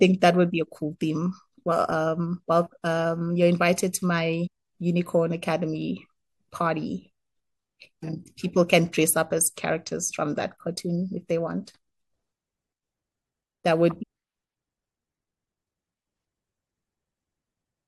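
Three short hits of damaged data in a compressed stream turn up in this speech, at 4.46 to 4.48 s, at 8.02 s, and at 14.02 to 14.04 s, each only about 20 ms long. At each spot some bytes of the compressed file got mangled, so the decoder misreads those frames, loses its place, and has to hunt for the next valid frame header. You hear it as a quick chirp or blip cutting into the speech.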